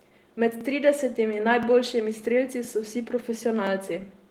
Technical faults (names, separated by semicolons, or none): overlapping chunks